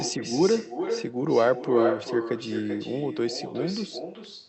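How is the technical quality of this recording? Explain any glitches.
The recording has one clear fault running through the whole clip: an echo with no canceller. Throughout, every phrase is followed around 0.4 s later by a second copy about 8 dB quieter. The far end is playing the call through a loudspeaker, its microphone picks it up, and no echo canceller removes it, so the speech returns after the full network round trip. The copy sounds thinner than the original. Unlike ordinary room reverberation, which smears directly into the tail of each sound, this is a distinct, delayed repeat with a gap before it, so it reads as a separate ghost of the phrase rather than a reflective space. The audio also carries the coding texture of the call path, with the top end stopping near 8 kHz, which fits a wideband Opus setting.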